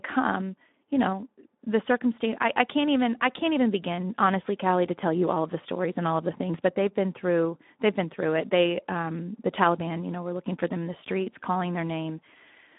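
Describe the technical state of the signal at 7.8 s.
At 7.8 s the speech carries Speex codec damage, which runs through the whole clip rather than starting there. The sound is confined to a telephone-like band of about 200 Hz to 3.7 kHz, with nothing above 3.8 kHz. The CELP coder has too few bits to model the excitation, which fits a rate near 11 kbps, so the speech comes out plainly noisy and hoarse, with a rough texture.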